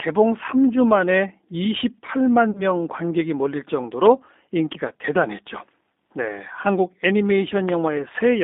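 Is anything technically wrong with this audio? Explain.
Yes. Two faults are audible in this speech.

The whole clip carries G.729 codec damage, and it is plainly audible. The band runs only from about 250 Hz to 3.7 kHz, so the speech sounds thin and boxed in. The codec rebuilds each 10 ms frame from a vocal tract filter, a pitch predictor and a few pulses. That coarse model gives the voice a rough, slightly synthetic edge, which fits a low-rate codec near 8 kbit/s.

From 2.51 to 2.63 s there is VoIP packet loss concealed by the speech codec. About 40 ms of audio went missing, which fits two lost 20 ms packets. The decoder filled the gap by repeating its last pitch and filter settings at falling gain. This produces a short, smeared buzzy tone or coloured noise that fades. Each frame depends on the one before, so the voice stays weak or distorted briefly after the gap.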